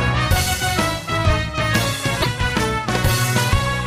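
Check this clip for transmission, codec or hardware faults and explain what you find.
One fault is present, damaged data in a compressed stream, from 2.18 to 2.26 s. For about 80 ms the sound breaks into a short, harsh blip. It doesn't belong to the surrounding audio. Some bytes of the compressed stream were corrupted at this point. The decoder misread the frames there and lost its place in the stream. It then searched ahead for the next valid frame header. The decoded output is garbled until it locks back on.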